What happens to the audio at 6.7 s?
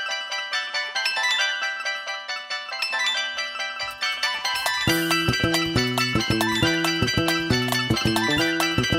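At 6.7 s the audio is still affected by a wrong sample rate, which runs through the whole clip. The samples are played three times faster than they were captured, consistent with 16 kHz material played at 48 kHz without conversion, so everything sounds sped up and raised about 19 semitones.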